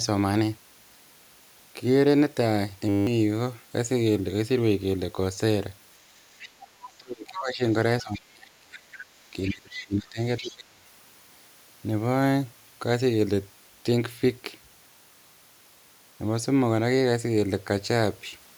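At 2.89 s the speech locks into a steady 100 Hz buzz lasting until 3.07 s, a system hang loop. The computer stalled while the sound hardware kept replaying the same 10 ms slice of its ring buffer, 18 times over, and roughly a fifth of a second of speech is lost. Because the loop is so short, it reads as a pitched tone rather than a stutter. A dropout would be silent instead, and a repeated syllable would be recognisable.

From 6.38 to 6.68 s a second, fainter voice appears underneath, about 20 dB below the talker. This is the other side's voice leaking through, most likely loudspeaker echo that the canceller failed to remove. The same intrusion returns at 8.0–8.2 s (about 25 dB down), 8.92–9.02 s, 9.46–9.87 s (the loudest, about 15 dB down) and 10.42–10.54 s. It differs from crosstalk or background chatter because it comes and goes in short scraps.

Interleaved with those leaks, the talker's own speech sinks, probably because of speech suppressed in double talk. 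This happens from 6.88 to 7.62 s, 8.02 to 8.89 s and 9.33 to 10.86 s, with drops of up to about 30 dB in places. When both sides were active, the canceller turned the near voice down along with the echo. Unlike a network dropout, the speech thins and ducks in uneven pieces rather than cutting cleanly.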